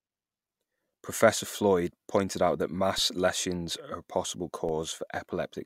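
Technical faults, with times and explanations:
2.98 s and 4.69 s, DC step: the zero line jumps by about -30 dBFS, then drains off through a 20 Hz high-pass. Each one is a low thump or click, the first right after "pointed out that" and the second after "lesions are a possible".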